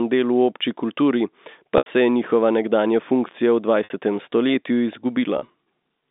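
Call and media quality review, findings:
Packet loss with pitch repetition at 1.78–1.86 s (80 ms gap) and 3.84–3.90 s (60 ms): brief held, buzzy tone where the receiver loops the last pitch period. At 5.38–5.54 s, scattered dropouts, longest 40 ms, five packets in all. Probable cause is the jitter buffer or network path, with concealment papering over the holes. The narrow G.711 phone band is audible throughout.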